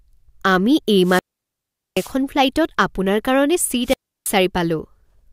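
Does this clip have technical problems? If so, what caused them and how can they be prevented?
Yes. Wireless microphone squelch dropouts occur from 1.01 to 2.16 s, with a 778 ms mute, and from 3.83 to 4.35 s, with a 327 ms mute. The fading FM signal brings a rise of hiss before the receiver's squelch mutes it. That hiss is what distinguishes it from a clean digital dropout. Keep the transmitter within range and in line of sight, and use diversity receivers.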